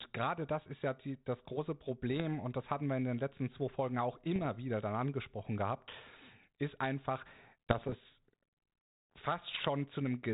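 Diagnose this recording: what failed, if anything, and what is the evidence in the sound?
The codec link on the transmission side failed: this is bit errors on an ADPCM link. Rough pops and short gritty bursts with brief level jumps occur at 2.12–2.21 s (right after "ja die das große"), 4.35–4.47 s (just before "wieder dann angesprochen gehabt"), 7.70–7.96 s (after "ist einfach") and 9.48–9.67 s. The band-limited, lightly hissy character fits a 32 kbit/s G.726 path. Each flipped bit corrupts the decoder's step size and predictor, so the damage smears on for milliseconds. The last two bursts are densest, pointing to a heavier error rate there.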